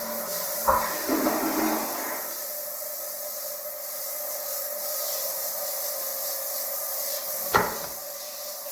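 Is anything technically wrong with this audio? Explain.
Yes. Generation loss runs through the whole clip. The sound has a swirly, smeared quality with hollow, watery gaps in the spectrum, and transients lose their edge. The likely cause is repeated lossy coding, consistent with Opus at around 48 kbit/s applied roughly five times. Each pass requantises on a shifted frame grid, so the noise and holes compound. Content still reaches 20.2 kHz, so this isn't a bandwidth cut. The damage is heavier than a single encode at that rate would produce.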